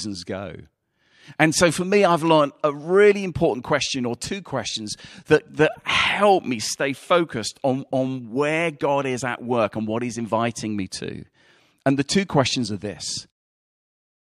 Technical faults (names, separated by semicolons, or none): none